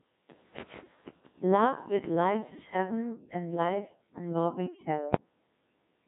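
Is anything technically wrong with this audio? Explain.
Yes. The whole clip has been through a Codec 2 vocoder, and heavily. The decoder rebuilds the speech from sine waves using only pitch, voicing, energy and a spectral envelope, so it comes out robotic and buzzy, with nothing above 3.8 kHz. The coarseness points to a 1.6 kbit/s mode.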